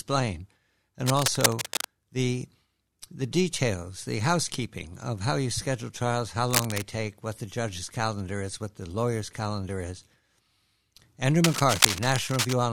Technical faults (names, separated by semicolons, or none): cable scratch noise